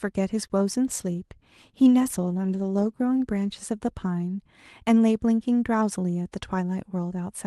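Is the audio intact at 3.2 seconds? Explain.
No, 3.2 seconds falls inside a call bitrate drop running from 0.87 to 3.26 s. The call's bandwidth estimate fell, so the encoder coded the speech more coarsely for about 2.3 s, which fits a cut from 32 to 16 kbps. That's why it sounds rougher and watery there.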